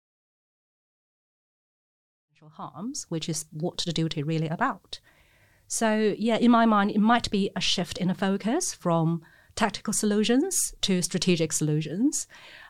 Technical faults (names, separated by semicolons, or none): none